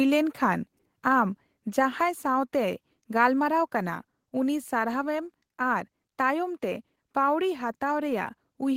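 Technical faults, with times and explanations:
1.02 s, microphone volume stepped down: speech and background drop together by about 2 dB in one step, likely the call software lowering the device's input volume. The waveform envelope shrinks abruptly there, and the spectrogram dims evenly across all frequencies.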